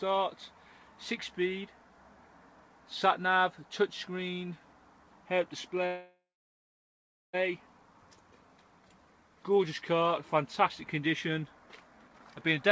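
From 5.86 to 7.35 s comes a call audio freeze, likely from delayed packets draining the jitter buffer. The last sound smears into a fading buzz or hiss, then about 1.15 s of silence. The audio resumes exactly where it stopped, so unlike a dropout nothing is lost.

From 12.06 to 12.52 s a jitter buffer speed-up plays the audio at 130% speed, trimming roughly 150 ms. It sounds hurried, but the pitch stays the same, unlike a resampling fault.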